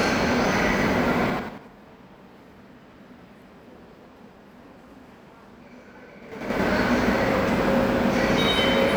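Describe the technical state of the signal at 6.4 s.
Zipper noise runs from 6.22 to 6.60 s. The level shifts by about 25 dB in unsmoothed 6 dB jumps, roughly ten a second, each leaving an audible tick.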